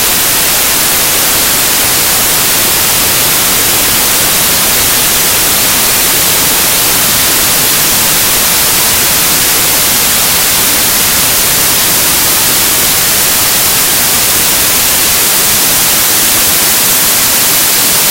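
Samples built from the wrong bytes run from start to finish. Each sample is assembled from misaligned or swapped bytes, so the rapidly fluctuating low-order byte ends up carrying the most significant part of every value. What should be the fine detail becomes the bulk of the signal, and the result is loud, harsh broadband noise, close to white on the loud sounds.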